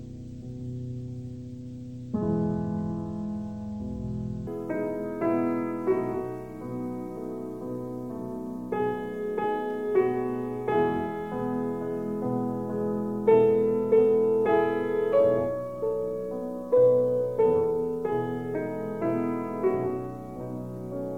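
From the start to about 4.47 s, the audio plays at half speed and drops a full octave, 12 semitones, with a faint mirrored copy up in the top half of the spectrum. That's stereo read as mono: left and right samples interleaved into one channel.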